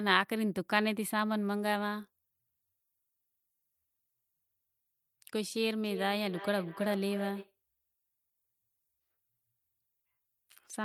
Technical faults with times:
5.84-7.56 feedback echo between two devices

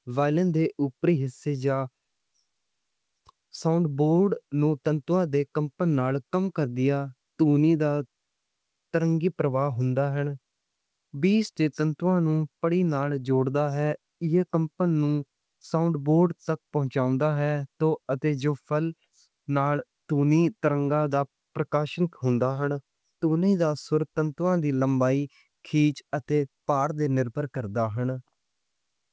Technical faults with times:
none

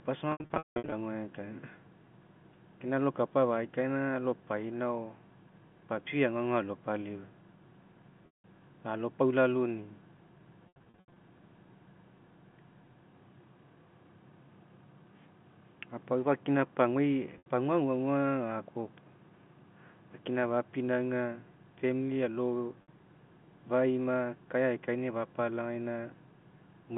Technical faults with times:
0.32-0.92 packet loss with pitch repetition
8.26-8.44 packet loss with pitch repetition
10.68-11.16 packet loss with pitch repetition
17.38-17.46 packet loss with pitch repetition
22.82-22.88 packet loss with pitch repetition

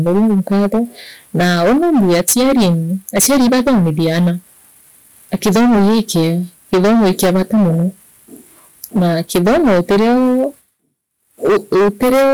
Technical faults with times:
0.00-12.34 hard clipping

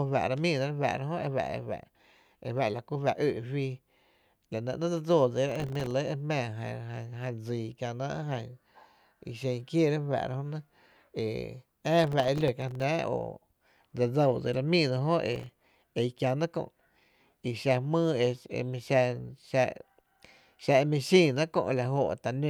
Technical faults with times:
5.49-5.91 processor overload crackle
12.04-12.83 processor overload crackle
15.33-15.65 processor overload crackle

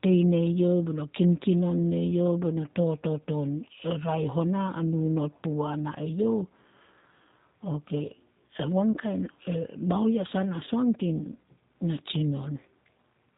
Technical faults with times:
0.00-13.38 G.729 codec
8.92-8.98 VoIP packet loss concealed by the speech codec
10.65-10.69 VoIP packet loss concealed by the speech codec

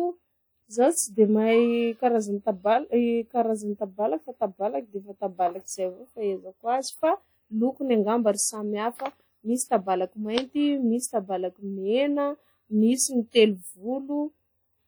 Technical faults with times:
0.00-14.87 WMA compression

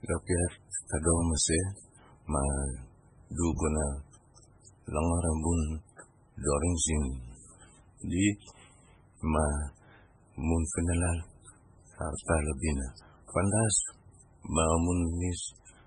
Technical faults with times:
0.00-15.86 MP3 compression

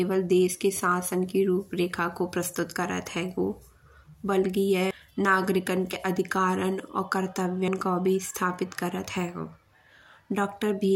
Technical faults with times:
4.91 dropped buffer (overrun)
5.93 dropped buffer (overrun)
7.68 dropped buffer (overrun)

